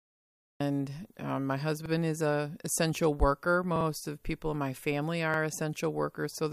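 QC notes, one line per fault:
0.00–0.60 s, cut-off start: the recording or stream began late, so the clip opens on digital silence and then drops straight into a sound already under way at 0.60 s, with no natural attack or fade-in.
1.86 s, 3.76 s, 5.34 s, repeated buffer: fresh audio missed its deadline, so the device replayed its last 46 ms block (which fits a 2048-sample buffer), once after "um my", twice after "is a essential worker", and once after "people in my family", each heard as a brief hard-edged stutter.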